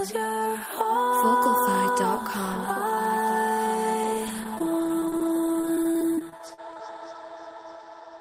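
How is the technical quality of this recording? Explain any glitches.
From 4.03 to 6.79 s the stream suffers repeated packet loss (robotic sound), with 17 short dropouts, the longest 39 ms. Each hole is patched by stretching the preceding sound, concealing about 12% of that span, so the audio turns choppy and robotic, with pieces missing.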